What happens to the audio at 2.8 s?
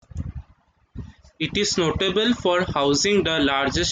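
Nothing goes wrong at 2.8 s; the speech carries on intact through that moment, with no dropout, click or distortion to be heard.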